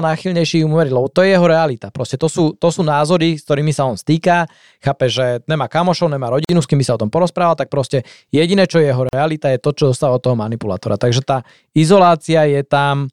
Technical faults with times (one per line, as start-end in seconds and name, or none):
6.45-6.49 gap at a join of encoded pieces
9.09-9.13 gap at a join of encoded pieces